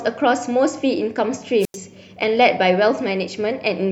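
At 1.60 s the speech hits a wireless microphone squelch dropout lasting until 1.77 s: the FM radio link weakens, hiss surges, then the receiver's squelch mutes output for about 91 ms. A spectrogram shows broadband noise, then a blank vertical gap before the speech resumes.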